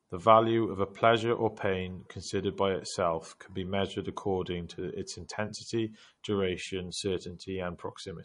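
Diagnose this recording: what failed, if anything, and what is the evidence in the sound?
The codec stage is where things went wrong, and the likely culprit is MP3 compression. Across the whole speech clip the damage is plainly audible, and nothing gets through above about 10.6 kHz, so the top end is sliced off at a fixed point. That's what an encoder does when it's short of bits, which fits a low rate around 40 kbps. It trims the treble and drops quieter frequency detail that flickers frame to frame, leaving that watery, swirly texture.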